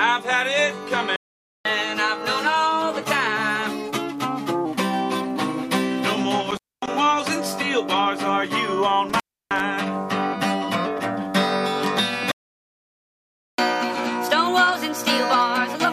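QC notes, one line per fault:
1.16–1.65 s and 12.31–13.58 s, playback stall: the sound halts mid-flow and goes silent for about 0.49 s, then for about 1.27 s, before resuming. This gap is likely the player running dry of buffered data or having its output thread blocked.
1.65–4.65 s and 13.58 s to the end, catch-up at higher speed: after each stall the audio runs fast and sharp. First it plays at 1.1x, about a semitone and a half high. Later it plays at 1.25x, roughly four semitones up. The player is resampling its backlog to recover lost time.
6.51–6.89 s and 9.09–9.60 s, intermittent contact: the sound drops out with crackle at both edges, leaving faint hiss for about 250 ms and then about 310 ms. A loose cable or plug is briefly opening the signal path.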